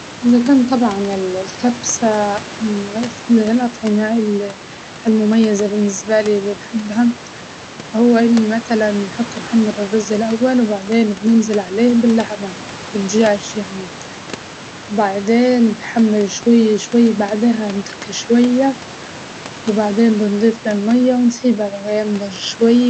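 There are no technical faults to describe in time order.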